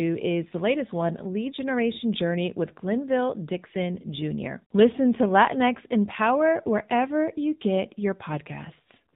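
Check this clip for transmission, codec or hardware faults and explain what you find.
One codec fault runs through the whole recording: the speech has passed through the AMR narrowband mobile codec. Throughout, the transmission squeezed it into a telephone-band model of the vocal tract, with nothing above 4 kHz surviving. The plainly audible buzzy, synthetic edge points to a low-rate AMR-NB mode around 7.4 kbps. Voices sound muffled and phone-like, with a rough, artificial texture.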